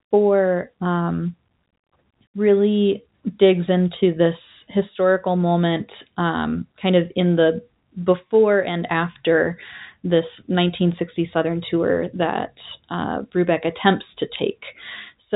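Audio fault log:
Nothing in this speech stood out on listening.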